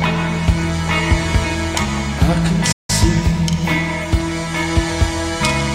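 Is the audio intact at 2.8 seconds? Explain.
No. At 2.8 seconds the clip is inside a playback stall running from 2.72 to 2.90 s, with the output falling silent for about 165 ms. The sound cuts off mid-flow and then picks up again. The likely cause is the player running dry of data or having its thread held up, so nothing reached the output until it recovered. A brief dropout would be a momentary hole of a few milliseconds. This is a sustained, clearly audible pause.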